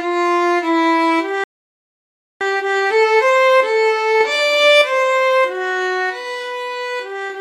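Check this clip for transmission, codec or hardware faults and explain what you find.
Two faults sit close together near the start: a dropout in playback followed by a hurried recovery.

Playback stall, 1.44 to 2.41 s. The sound cuts out mid-flow and the output stays silent for about 0.97 s before resuming. The likely cause is the player running dry of buffered data, or its output thread being held up, so nothing reached the audio device until the feed recovered. It is heard as a clean hole in the middle of ongoing audio.

Time-compressed catch-up, 2.41 to 3.37 s. Once playback resumes, the player works off the backlog built up during the gap by removing short slices and cross-fading across the joins, running at 2.0 times normal speed for just under a second. Because it drops material rather than resampling, the pitch stays put, but the audio sounds rushed.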